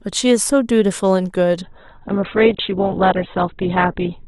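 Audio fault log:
1.62 s to the end, adaptive stream at a lower bitrate: with no gap, the treble suddenly vanishes above about 4.2 kHz and the sound turns dull, with more codec artefacts. This fits the stream switching from roughly 64 kbit/s Opus to a much lower-bitrate version near 8 kbit/s.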